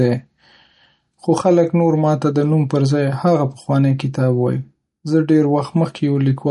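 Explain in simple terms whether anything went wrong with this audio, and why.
The whole clip sounds watery and dull, with nothing above about 11.2 kHz. This is likely MP3 compression, squeezed hard enough to audibly damage the sound.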